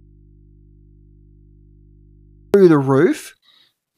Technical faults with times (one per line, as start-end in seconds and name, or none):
0.00-2.54 audio dropout to a faint residue